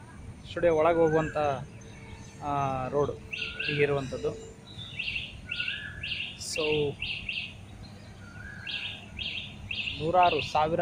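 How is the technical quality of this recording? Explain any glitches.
No technical glitches can be heard anywhere in the recording, and the signal stays steady and continuous throughout.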